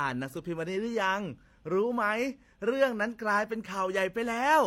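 Throughout the speech, two kinds of compression damage sound at once, most likely from transcoding between lossy codecs: it fits an MP3 at 64 kbit/s re-encoded as HE-AAC at 32 kbit/s. Nothing remains above 16.2 kHz. Unlike a single codec, MP3-style smearing persists beneath HE-AAC's own artefacts.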